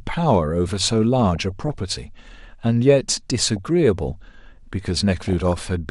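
Throughout the speech the sound is dull and plainly granular, with upper detail coming and going. This is likely MP2 compression: too few bits leave upper sub-bands switched off and the remaining ones coarsely quantised, which fits a rate around 80 kbps.

DAB burbling appears from 1.2 to 1.78 s, as a brief blip at 3.56 s, and from 5.24 to 5.58 s. Bit errors, well under one percent, slipped past error correction, corrupting samples so short blips of noise appear in single sub-bands.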